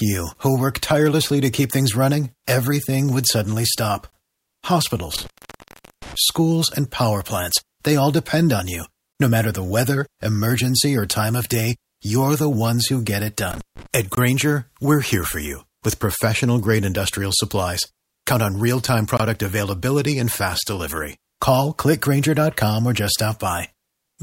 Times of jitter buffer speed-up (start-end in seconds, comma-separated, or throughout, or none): none